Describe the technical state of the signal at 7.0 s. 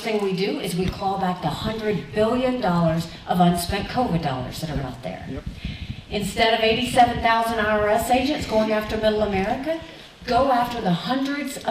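Right around 7.0 s there's a short burst of hard clipping, from about 6.98 to 7.04 s. The peaks there run roughly 3 dB past what the stage can pass, so they get sliced flat. That adds high harmonics you hear as a quick crackly edge on the sound.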